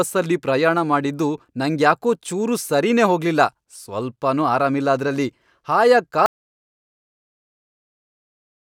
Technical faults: audio dropout to silence

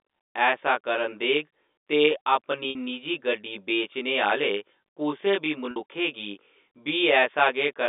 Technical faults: channel delay (comb filtering); packet loss with pitch repetition

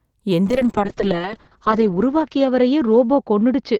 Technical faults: call bitrate drop

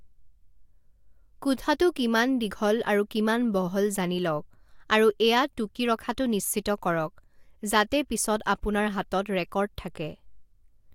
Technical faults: none

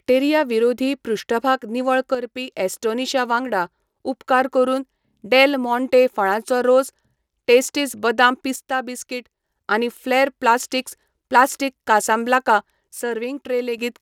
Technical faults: one channel drops out

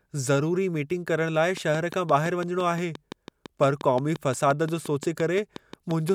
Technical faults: train of clicks

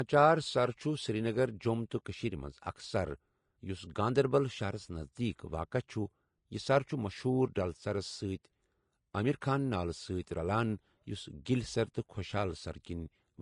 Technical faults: Vorbis compression

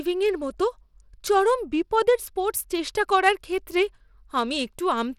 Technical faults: Bluetooth SBC compression

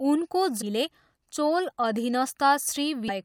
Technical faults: damaged data in a compressed stream

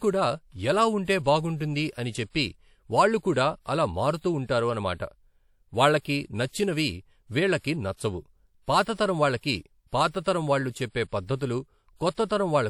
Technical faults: low-bitrate audio saved at a high bitrate

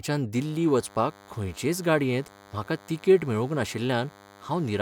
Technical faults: DECT cordless phone buzz

